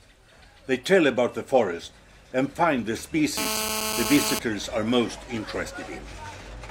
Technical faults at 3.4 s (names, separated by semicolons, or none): GSM phone buzz